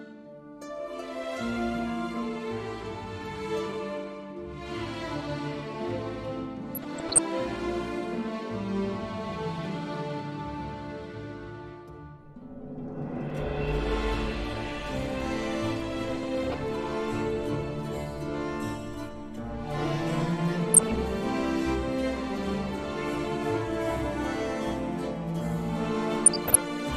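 DAB burbling appears at 6.75–7.20 s, 16.16–16.59 s, 20.72–21.03 s and 26.26–26.58 s. Bit errors of roughly 0.5 to 0.7 percent slipped past error correction, corrupting MP2 sub-band data. Rather than silence or a repeated fragment, the sound continues under bubbly blips confined to separate frequency bands.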